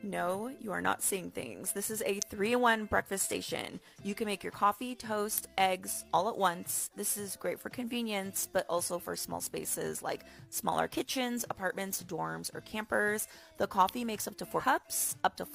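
A nearby switch, motor or static discharge likely arcs briefly, and the line picks it up as an electrical switching spike: sharp snaps at 2.22, 5.38 and 13.89 s. At 14.59 to 14.64 s, compressed frames are skipped, dropping about 100 ms of 20 ms frames, so the sound jumps ahead.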